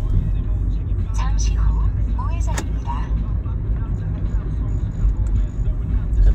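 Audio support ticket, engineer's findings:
No fault found: the everyday-sound recording was checked across its full duration and nothing needs action.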